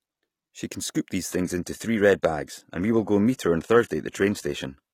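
Right after "can scoop these", at 1.28 s, the adaptive stream drops to a lower bitrate: treble above 14.9 kHz vanishes, with a synthetic HE-AAC-style sheen.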